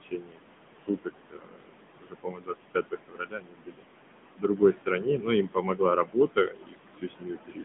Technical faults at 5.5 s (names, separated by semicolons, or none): noise suppressor artifacts; AMR narrowband mobile codec; speech cut by the noise suppressor